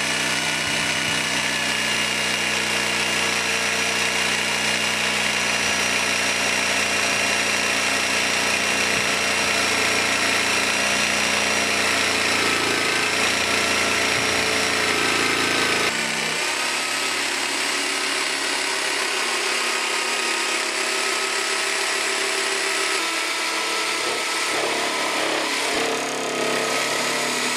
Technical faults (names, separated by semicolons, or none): repeated buffer